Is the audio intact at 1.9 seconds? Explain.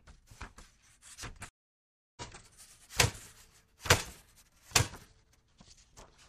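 No. At 1.9 s the audio has dropped out: from 1.49 to 2.22 s there is about 675 ms of silence, and the sound returns roughly 0.7 s further along. This is a stream reconnect: the connection broke, the player reconnected, and a fresh decoder resumed mid-stream.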